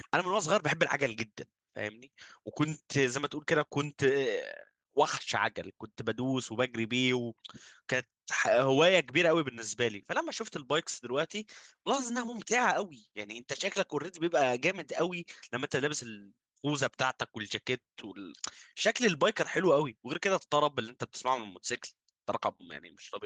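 No technical faults can be heard in this recording.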